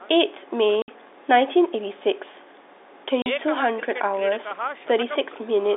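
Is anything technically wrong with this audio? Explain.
Yes. There is packet loss filled with silence, from 0.82 to 0.88 s and from 3.22 to 3.26 s. Lost packets are replaced by silence, leaving 60 ms and 40 ms holes that fit 20 ms packets. The speech drops out abruptly, with hard edges. The telephone-band G.711 coding limits the speech to about 300 Hz to 3.7 kHz.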